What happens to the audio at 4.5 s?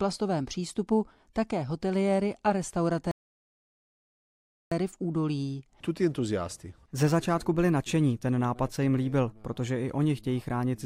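At 4.5 s the speech is silent, partway through a gap from 3.11 to 4.72 s, after which it picks up exactly where it stopped. This is a rebuffering stall: playback ran dry and waited for more data, adding about 1.6 s without losing anything.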